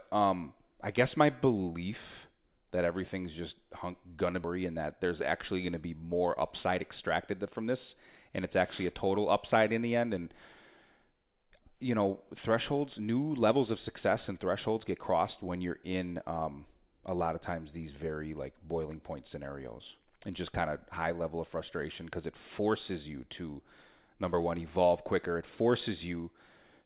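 At 4.44 s the speech jumps forward in a skip ahead. Roughly 0.7 s of audio is missing. It was dropped while later audio already waited in the buffer. The two sides join almost directly by 4.59 s, with no audible gap.

From 5.04 to 5.54 s comes a jitter buffer speed-up. The buffer held surplus audio, so short pitch-period pieces were cut repeatedly, about 50 ms in all. Speech runs at 108% speed at unchanged pitch and sounds hurried.

A second jitter buffer speed-up runs from 7.31 to 8.62 s. Here the rate is 105%, removing around 70 ms. The trimming is gentler but longer. The speech again feels slightly rushed, though its pitch holds steady. Through the call path, which fits G.711 mu-law, nothing is heard above 4 kHz.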